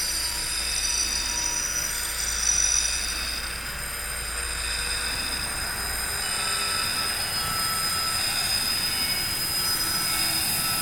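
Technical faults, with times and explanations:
5.16, 6.22, 6.97, 7.90 and 10.08 s: dropped buffer (overrun). At each point the sound jumps forward abruptly, with no gap of silence. A short chunk of audio is missing, roughly 50 ms at 5.16 and 7.90 s and roughly 150 ms at the other three. The likely cause is capture software failing to collect its samples before the hardware overwrote them, so the surrounding audio is spliced straight together.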